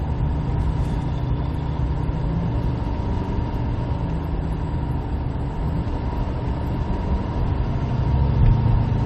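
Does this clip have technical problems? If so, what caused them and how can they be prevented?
No, there are no technical problems to report in this clip. Nothing in it points to a fault, so there is no cause to trace and nothing to prevent.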